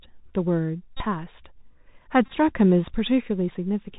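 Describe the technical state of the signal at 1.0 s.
At 1.0 s a Bluetooth headset packet repeat runs from 0.97 to 1.03 s. Lost packets were replaced by re-decoding the previous one every 3.75 ms, giving a steady buzz near 267 Hz. Unlike a dropout, the sound keeps going.

Under this lies the Bluetooth CVSD headset codec, active throughout. Its one-bit adaptive-step coding at 64 kbps cuts everything above 4 kHz and adds granular hiss and scratchy sibilants. This is constant band-limited grain, not a periodic buzz.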